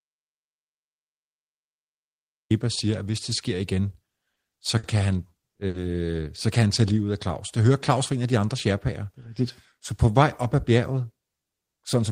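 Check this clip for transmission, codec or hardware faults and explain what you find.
Two kinds of fault are present: a dropout to silence at the start and three short stalls from late packets.

From 0.00 to 2.50 s there is an audio dropout to silence already under way as the clip begins. It is silent with no room tone until the speech resumes at "siger at hvis det". The likely cause is a lost input, with the recorder writing silence.

Short stalls from a late packet occur at 4.33–4.39 s just after "hvis det sker igen", at 4.78–4.86 s, and at 5.67–5.77 s just before "så kan han tage". Each time the jitter buffer ran dry and the receiver held the last sound until the packet arrived, for 30, 50 and 70 ms respectively. Nothing is lost, but the speech hangs briefly with a faint buzzy smear, and the delay grows with each stall.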